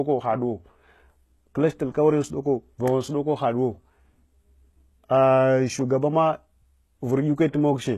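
Right through the speech there's plainly audible coding damage, likely HE-AAC compression at a low rate, roughly what you'd expect near 16 kbps. Nothing survives above 12.3 kHz, and the rebuilt treble doesn't line up with the real harmonics below it, so s sounds come out gritty and lispy.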